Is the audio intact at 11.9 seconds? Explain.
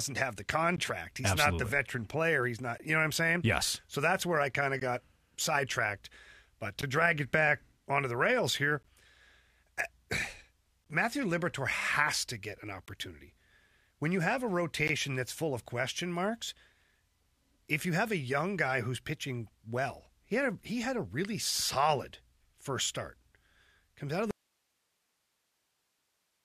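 Yes, the speech at 11.9 seconds comes through intact, with no dropout, click, distortion or other fault at that moment.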